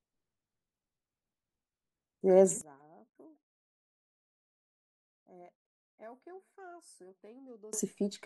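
From 2.61 s to 7.73 s the speech drops about 28 dB, which points to one channel inverted. One side's polarity is likely flipped, so the centred voice cancels in mono and only a faint difference remains.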